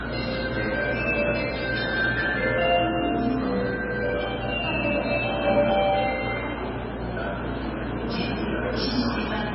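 From start to finish the audio was most likely squeezed through low-bitrate MP3 compression, with damage heavy enough to suggest a rate of roughly 15 kbps. Starved of bits, the encoder dropped everything above 5.6 kHz, so the sound is dull and boxed in, and it discarded weaker frequency lines that flicker in and out between frames. The result is a watery, swirling texture with metallic chirps on bright detail and smeared, softened attacks.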